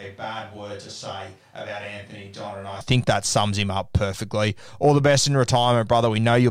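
A speech clip that opens already on a distant microphone. Until 2.81 s the voice sounds roomy and hollow, thin in the bass, about 10 dB quieter, with room noise around 30 dB below it, likely because the close microphone's feed was missing. On the waveform, amplitude jumps abruptly at 2.81 s. On the spectrogram, weak low frequencies and a raised noise floor before that point give way to fuller, cleaner energy.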